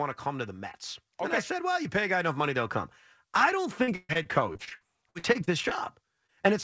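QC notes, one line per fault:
1.18–2.78 s, automatic gain rising: level of speech and background swells together by about 4 dB before "I don't"; the waveform envelope widens steadily.
3.84–5.73 s, repeated packet loss (robotic sound): after "I don't", 14 gaps (longest 135 ms) patched by continuing the last sound give choppy, robotic speech; the spectrogram shows smeared, repeated harmonic blocks.
6.27–6.30 s and 6.42–6.46 s, short concealed packet loss: each 20 ms hole is partly filled by extending prior sound, causing brief smears; the spectrogram shows short stretched patches below the 8 kHz ceiling.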